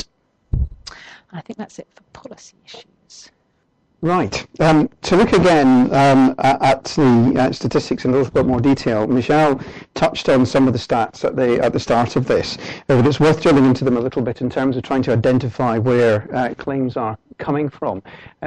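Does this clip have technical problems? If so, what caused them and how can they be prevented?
Yes. MP3 compression artefacts run throughout, likely from a low-bitrate encode, which fits roughly 64 kbps. Short of bits, the encoder zeroes weak frequency lines that flicker between frames, giving a plainly audible watery, swirly texture and smeared attacks. Keep an uncompressed or high-bitrate master and encode MP3 at a higher bitrate.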